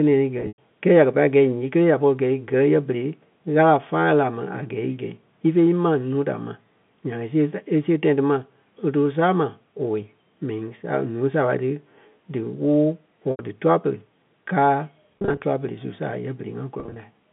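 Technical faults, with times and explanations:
0.38 to 0.58 s, packet loss with pitch repetition: about 140 ms dropped over 200 ms, longest gap 100 ms, so the repeated pitch period buzzes, then fades toward silence.
13.31 to 13.39 s, packet loss with pitch repetition: an 80 ms gap bridged by looping the last pitch cycle, heard as a briefly held, slightly buzzy tone that fades toward silence.
15.18 to 15.43 s, packet loss with pitch repetition: 140 ms lost in short bursts up to 30 ms across 260 ms, giving a stuttery, held quality as each hole gets patched.
16.80 to 16.96 s, packet loss with pitch repetition: 100 ms lost in bursts up to 30 ms over 160 ms, a quick run of small buzzy holds.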